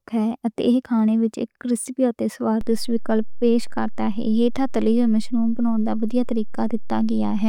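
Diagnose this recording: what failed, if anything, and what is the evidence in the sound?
A DC step at 2.61 s, just after "وچ ایک ریسپی تے", comes from the converter or analogue input stage. The waveform's zero line jumps by about -22 dBFS and stays displaced to the end of the clip, with no return or decay. The sudden shift is heard as a single low thump or click at that moment, while the speech carries on unchanged above the new offset. This fits a converter recalibrating mid-recording or an input carrying a DC offset being switched in.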